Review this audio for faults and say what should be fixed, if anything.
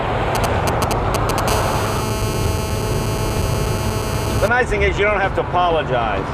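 GSM signalling bursts from 0.35 to 1.40 s: a nearby 2G phone's short radio bursts are rectified by the audio circuitry. This produces galloping ticks and brief 217 Hz buzzes at roughly the programme's level. Keep phones away from the recording chain, or switch them to flight mode.

GSM phone buzz from 1.48 to 4.48 s: a phone in a call transmits steadily at 217 Hz, and the rectified pulses give a raspy, harmonic-rich buzz about 8 dB below the signal. Use shielded, balanced cabling with RF filtering at the inputs, and keep phones well clear.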